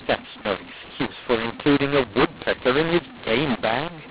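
Throughout the clip, speech coded with G.711 mu-law is decoded as A-law, a mix-up between the two laws. Every level is misread, some too loud and others too soft, so the speech turns harsh and distorted, and quiet gaps fill with hiss.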